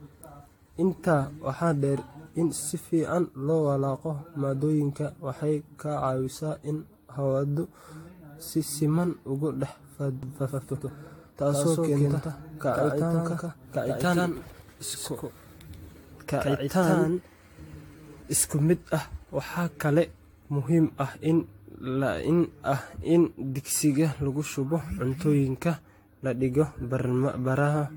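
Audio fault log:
throughout generation loss: The speech sounds swirly, smeared and hollow, with blurred consonant attacks and nothing above 18.7 kHz. This is worse than one pass at the bitrate would give, and it likely comes from around seven repeated AAC-type encodes, each adding fresh quantisation noise and spectral holes.
10.23–18.23 s doubled audio track: A second full-band copy of the speech, about as loud as the original, trails it by roughly 150 ms. That is likely a second out-of-step capture or edit. Unlike an echo or reverb, it has no decay or room colour, and it starts and stops abruptly.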